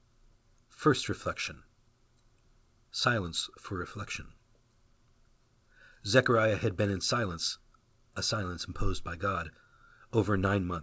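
No technical faults occur in this speech at any point, and the only thing to note is the call path's expected top end, with nothing audible above 8 kHz.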